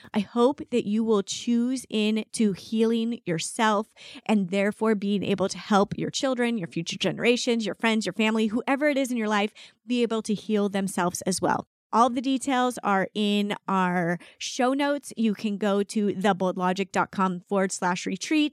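No technical faults can be heard anywhere in the recording, and the signal stays steady and intact throughout.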